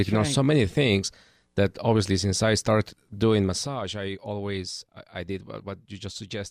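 A speech clip with zipper noise between 3.33 and 3.71 s, where the level drops by roughly 10 dB. The gain is lowered in discrete 1 dB steps at around fifty steps per second, with no smoothing between them. Each jump produces a small click, and together they form an audible ticking, or zipping, that rides on the speech for the duration of the fade.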